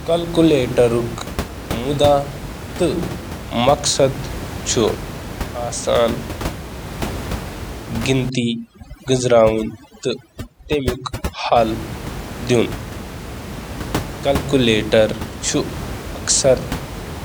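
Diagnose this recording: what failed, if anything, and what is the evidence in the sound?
Overdone noise removal in the call-processing stage runs from 8.30 to 11.56 s. The room noise, which sits about 10 dB below the speech, drops there, leaving twinkling specks. The suppressor is set too aggressively: any frequency band close to its noise estimate gets pulled far down or switched off, taking quieter speech components with it. On a spectrogram the background floor goes almost black, dotted with isolated flickering bins, and the speech harmonics look ragged and gapped.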